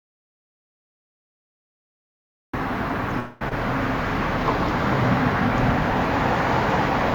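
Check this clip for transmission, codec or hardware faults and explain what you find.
Three faults are audible: a dropout to silence at the start, a call audio freeze a little after three seconds, and a skip ahead right after it.

Audio dropout to silence, 0 to 2.53 s: the input was likely lost, through a disconnected device, a failed link or a mute, while the recorder kept writing silence. The clip opens already in this state, so the first two and a half seconds are dead silence with no room tone at all. The sound then begins abruptly at 2.53 s. Whatever occurred during that span is gone.

Call audio freeze, 3.19 to 3.42 s: packets were likely held up in transit and the jitter buffer ran dry, so the receiver stretched the last bit of sound to cover the wait. That produces about 214 ms of smeared, buzzy continuation that never drops to silence. When the delayed audio arrives it resumes where it stopped, so nothing is lost, but the stream now runs about 214 ms late.

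Skip ahead, 3.49 to 3.52 s: audio was discarded while later material was already queued, typically as the jitter buffer sheds the delay the freeze just built up. About 150 ms of sound is missing. Only about 22 ms of filler bridges the cut, so the two sides are joined almost directly and the sound lurches forward with an audible jump rather than a gap.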